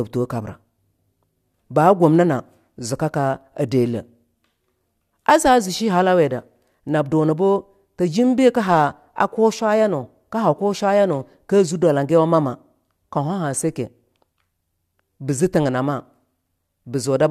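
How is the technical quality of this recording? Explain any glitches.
No glitches or faults detected.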